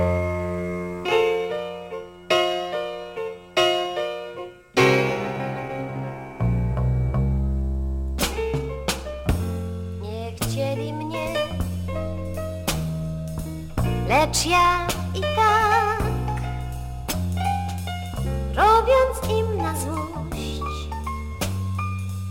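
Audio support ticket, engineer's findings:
Crude rate conversion, whole clip. Gritty inharmonic fizz riding loud and high content, roughly 25 dB below the signal. Probable component: unfiltered 48 kHz to 44.1 kHz resampler dropping nearest samples, so the periodic timing error produces shifted, inharmonic copies of the audio.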